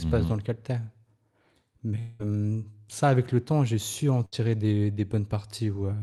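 A long network dropout runs from 1.99 to 2.21 s. For about 0.2 s the sound stops moving forward and is replaced by a stretched continuation of what came just before, a buzz or hiss that fades but never drops to silence before the audio picks up again further along. The likely cause is a stall in arriving audio that forced the receiver to fill the whole gap by extending the last sound, so roughly 200 ms of the original is simply skipped.

A burst of packet loss follows at 4.25 to 4.41 s, right after "temps j'ai su en". Here a shorter run of audio, about 60 ms, failed to arrive in time. The receiver bridged it by holding the previous sound for about 67 ms and fading it, then rejoined the stream a little later. The missing section never returns. The held sound carries the band-limited texture of the call codec, which fits Opus with its top end stopping near 12 kHz.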